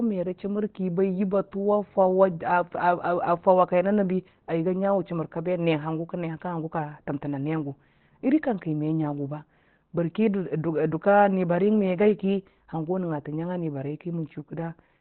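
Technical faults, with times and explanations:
Throughout, Opus compression. The speech has nothing above 4.3 kHz, so it sounds narrow and telephone-like. The damage is heavy. Consonants lose their crispness, and the speech turns muffled and hoarse. This is likely an Opus encoder working in its SILK speech mode at narrowband. That mode models speech instead of keeping every band's energy. The sound fits a low bitrate of about 12 kbps, where fine detail is given up.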